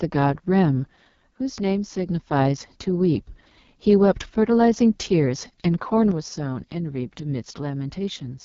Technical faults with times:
0.00-8.45 AMR wideband (HD Voice) codec
6.11-8.45 one channel drops out

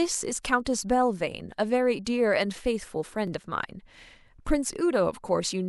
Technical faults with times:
1.97 compressed frames skipped
3.27 overlapping chunks

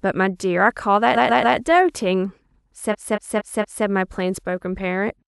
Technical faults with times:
1.14-1.56 repeated frames
2.90-3.83 repeated frames

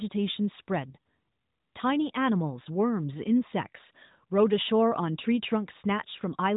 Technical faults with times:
none

